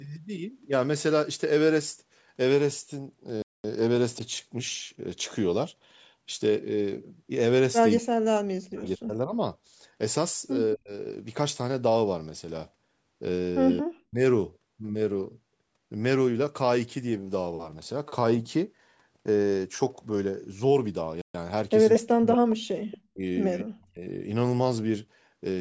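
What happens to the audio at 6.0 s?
Nothing goes wrong at 6.0 s: the speech carries on intact, with only the ordinary trimming of the lowest bass from the call microphone processing, which is normal for a call.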